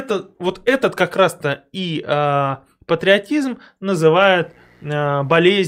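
From 4.16 s, right after "и э патриотизм", a mains buzz sets in and runs to the end: a steady, raspy buzz built on 60 Hz harmonics reaching several kilohertz, well below the speech, from switching spikes entering twice per mains cycle through a dimmer, rectifier or missing shield.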